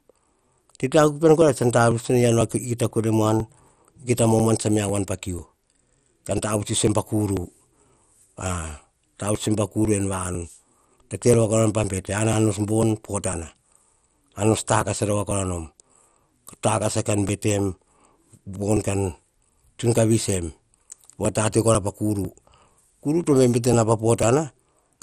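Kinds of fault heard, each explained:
MP2 compression: The speech sounds dull and gurgling, with a granular roughness that stays plainly audible throughout. This is likely MPEG Layer II coding at a low bitrate, around 64 kbps. Starved upper sub-bands are shut off, leaving nothing above about 15.1 kHz.
Periodic USB or driver dropouts: Regular ticks run from 0.42 s to 24.72 s, one every 0.496 s. Each marks a few milliseconds of audio skipped outright. The pattern points to a background task repeatedly stalling the USB bus or audio driver.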